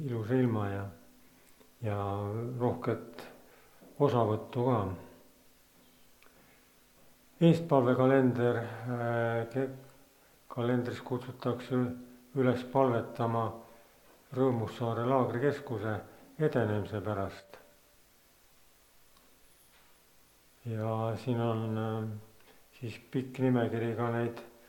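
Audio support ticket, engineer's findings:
Channel dropout, 17.40–17.50 s: one stereo channel likely lost for 0.1 s. Mono sum drops about 6 dB abruptly, then level snaps back.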